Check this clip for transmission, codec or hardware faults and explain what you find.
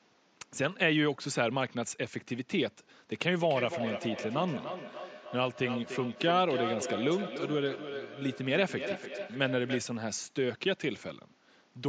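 There is one fault: feedback echo between two devices, from 3.13 s to 9.96 s. Across that stretch the speech keeps coming back at roughly a third of a second, each return thinner and more ringing than the last. At their loudest the repeats reach about 8 dB below the direct speech, so they are clearly audible over the room noise, which sits about 37 dB down. This happens when two devices share a call in the same room: one plays back what the other's microphone sent, that microphone captures it again, and neither echo canceller removes sound played by the other device, so the loop keeps recirculating the speech.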